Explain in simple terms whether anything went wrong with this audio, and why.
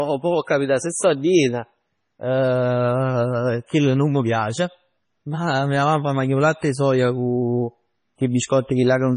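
MP3 compression, most likely, runs from start to finish in this speech. Squeezed hard, the encoder cut all sound above 10.5 kHz and dropped quieter details that flicker on and off, making the voice dull, watery and swirly, with smeared consonants.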